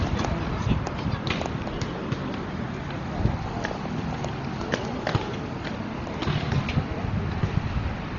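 Across the whole clip, the audio was likely squeezed through Dolby Digital compression at a very low bitrate, the kind of starvation that fits roughly 32 kbps. Short of bits, the encoder discarded everything above 7 kHz and left many remaining frequency lines without mantissa data, so the decoder filled them with dither noise. The damage is heavy: the sounds come across dull and muffled, with a rough, fluttering grain clinging around any tonal parts.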